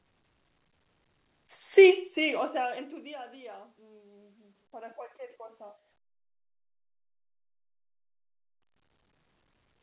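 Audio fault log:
No faults are heard in this speech clip. The sound has passed through a call path with nothing above 4 kHz, which fits a narrowband telephone codec such as G.711 A-law.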